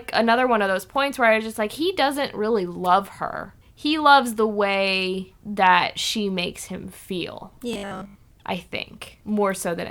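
From 7.73 to 8.15 s, new audio likely arrived too seldom, and the software filled the gaps by replaying the last short buffer rather than waiting for fresh samples, so most of that stretch is repeated material while the real speech is skipped. This is robotic sound from repeated short buffers. The repeats impose a fixed 50 Hz buzz, which fits a 20 ms buffer, turning the speech into a rigid, metallic buzz that only loosely tracks the words.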